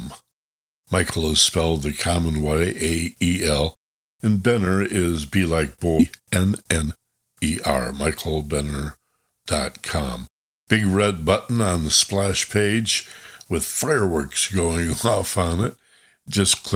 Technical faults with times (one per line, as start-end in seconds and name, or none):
5.99 skip ahead
6.03-8.55 jitter buffer speed-up